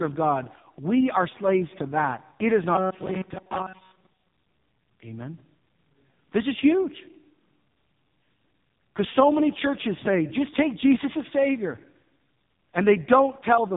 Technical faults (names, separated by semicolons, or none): AMR narrowband mobile codec; robotic sound from repeated short buffers